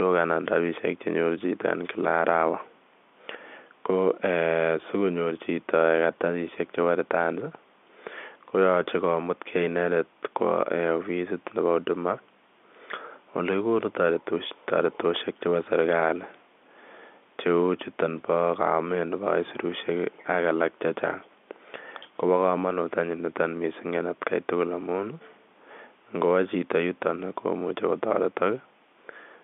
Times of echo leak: none

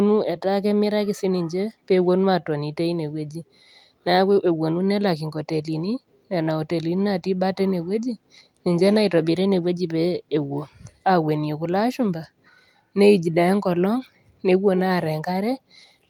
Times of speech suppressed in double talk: none

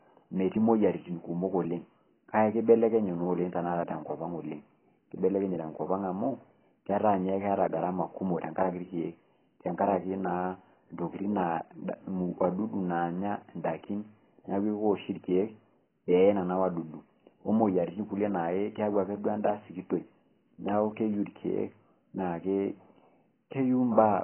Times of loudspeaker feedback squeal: none

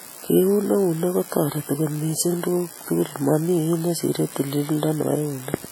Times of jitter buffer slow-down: none

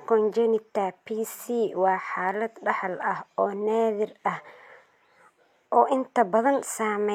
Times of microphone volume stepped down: none

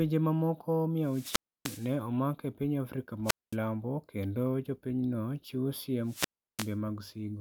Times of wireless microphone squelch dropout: 1.02-1.97, 3.24-3.56, 6.04-6.76

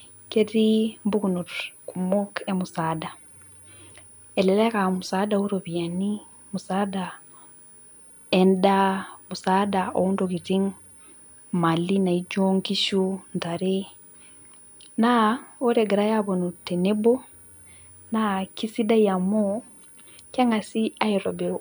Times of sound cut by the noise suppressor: none

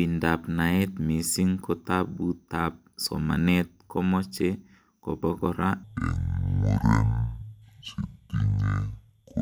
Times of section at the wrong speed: 5.83-9.42

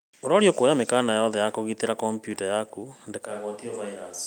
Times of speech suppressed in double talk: none

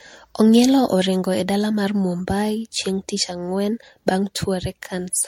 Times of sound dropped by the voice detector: none

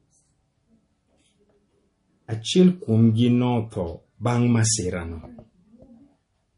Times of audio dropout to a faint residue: none

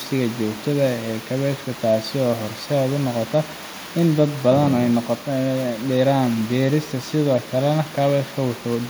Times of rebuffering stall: none

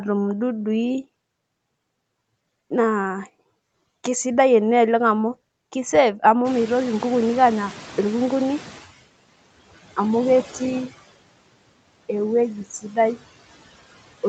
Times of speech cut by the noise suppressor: 12.65-12.97

